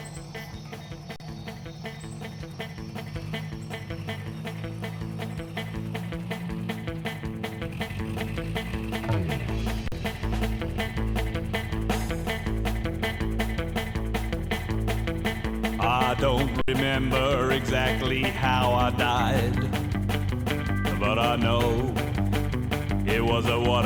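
At 1.16 s the sound stops dead for 40 ms. The same thing happens at 9.88 s for 40 ms, and at 16.61 s for about 66 ms. Each is an underrun with held sample. The output buffer ran dry, and the converter froze on its last value. The waveform sits flat, so each dropout begins almost silently. About as much audio as each gap lasts is missing each time.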